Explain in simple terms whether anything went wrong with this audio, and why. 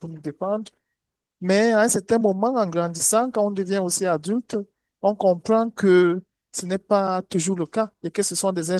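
Nothing went wrong here.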